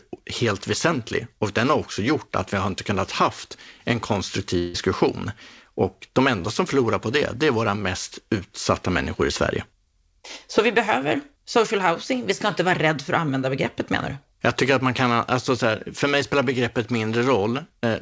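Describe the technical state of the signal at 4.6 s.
At 4.6 s the speech is inside a gap from 4.58 to 4.76 s, most likely a long network dropout: roughly 160 ms of audio never arrived, and the receiver filled almost all of it by stretching the last sound into a fading buzz rather than leaving silence. No silent stretch follows. That fading fill across the whole gap separates it from a brief packet-loss click or a hard cut to silence. Around it, the band still stops at 8 kHz.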